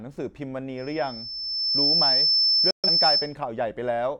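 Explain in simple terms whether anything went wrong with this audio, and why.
Two things went wrong. First, loudspeaker feedback squeal: a microphone picked up its own loudspeaker, and the sound looped round and grew. From 0.77 s a high, thin whistle near 5.3 kHz swells over about a second, ends up louder than the speech, and stops at 3.36 s.

Second, a digital broadcast dropout: the receiver briefly lost usable signal and muted itself until good data returned. At 2.71 s the sound cuts out almost instantly, leaving a hole of about an eighth of a second before it comes back at 2.89 s.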